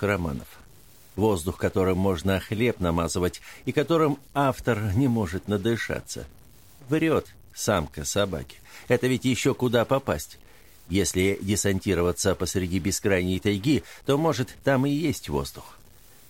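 Harsh, buzzy distortion runs throughout, with noise filling the pauses. The likely cause is a stuck bit whose step is around -45 dBFS.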